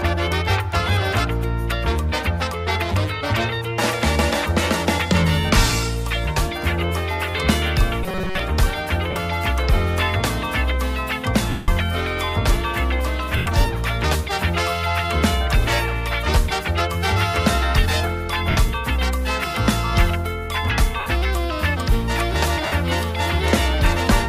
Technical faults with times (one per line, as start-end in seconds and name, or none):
8.04-8.39 robotic sound from repeated short buffers
9.11-9.16 lost LE Audio frames
11.50-11.68 lost LE Audio frames
13.37-13.46 lost LE Audio frames
18.50-18.57 lost LE Audio frames
21.00-21.06 lost LE Audio frames
22.66-22.72 lost LE Audio frames